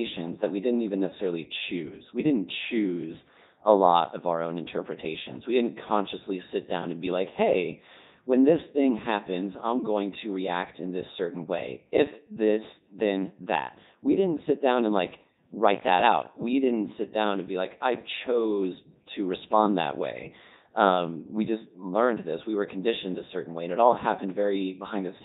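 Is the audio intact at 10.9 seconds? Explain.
No. At 10.9 seconds the speech is passing through a Codec 2 vocoder, as it does for the whole clip. Only pitch, voicing, energy and a rough spectral shape survive. The decoder rebuilds the voice from sine waves, so it sounds heavily robotic and buzzy. That fits the 3.2 kbit/s mode.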